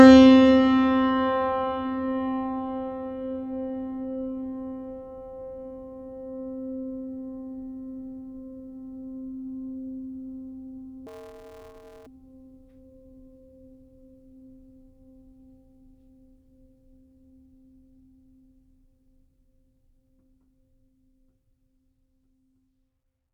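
From 11.07 to 12.07 s the music turns into a robotic buzz: planar audio read as interleaved. Each 5.33 ms block of left-then-right samples is taken as alternating pairs, producing a 188 Hz block-rate buzz without octave shift, seen spectrally as dense harmonic striping.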